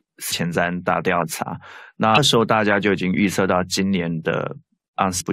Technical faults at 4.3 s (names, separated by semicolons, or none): none